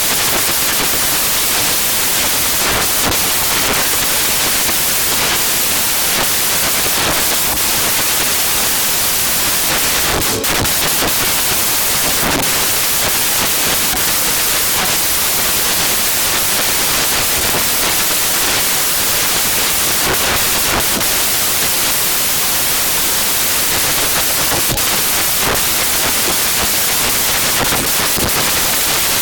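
From start to finish the samples are built from the wrong bytes. Each value is assembled with misaligned or swapped bytes, so fast-changing low bits dominate. The result is loud, harsh broadband noise: a spectrogram shows energy spread widely across frequencies, and the waveform is dense hash.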